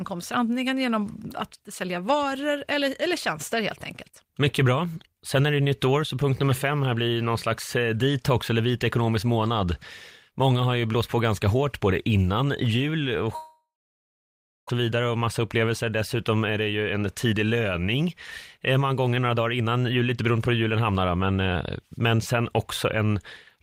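At 13.35 s the speech cuts out and doesn't properly return until 14.70 s. The last sound is stretched into a short fading buzz, and then roughly a second is just silence. When the speech comes back, about 0.8 s of it is simply gone. That's most likely a long network dropout, with the receiver papering over the gap, and it left the stream running about half a second behind.

Right after that the receiver claws the delay back with a jitter buffer speed-up. It snips out tiny pitch-period slices over and over, so the speech gets faster while the pitch stays put. The first stretch runs from 14.83 to 15.84 s at 106% and drops well under a tenth of a second. The second, from 16.29 to 18.03 s, is the most hurried at 115%, losing about a third of a second. The last runs from 18.57 to 20.49 s at 109% and loses about a fifth of a second.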